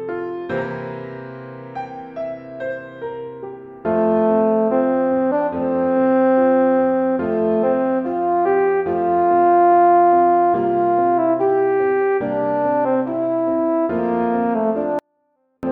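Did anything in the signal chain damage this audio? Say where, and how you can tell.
Yes. From 14.99 to 15.63 s the sound stays clean but drops about 48 dB, nearly inaudible. This is a 24-bit alignment error at sample-format conversion: 24-bit samples in the low bytes were read as 32-bit.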